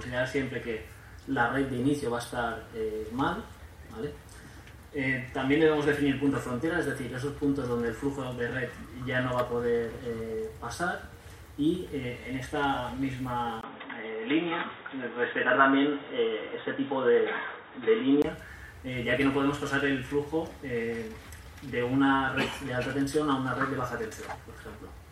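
At 13.61 s, after a brief gap of about 20 ms, the sound turns dull and boxy, with nothing above 3.8 kHz. The level shifts by roughly 5 dB and a faint new background noise appears, far below the signal. At 18.24 s the full band returns. The likely cause is an input switched to a poorer device: the recording moved to a narrower-band microphone or headset profile with its own tone and noise, then switched back.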